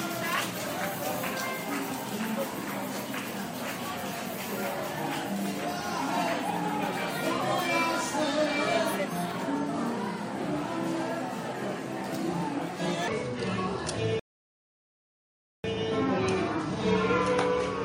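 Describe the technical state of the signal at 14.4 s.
At 14.4 s the signal is silent: a rebuffering stall runs from 14.20 to 15.64 s, where playback ran out of buffered data and paused, adding about 1.45 s before resuming exactly where it stopped. Around that gap, from 13.08 s to the end, the section plays at the wrong speed, 0.63 times normal, so the sound is slowed and pitched down by about seven semitones, likely from a clock mismatch.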